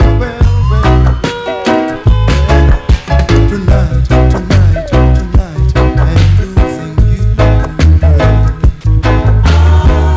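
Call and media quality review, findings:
No faults found; the WebRTC call path carries the audio with G.722 coding and nothing above about 8 kHz.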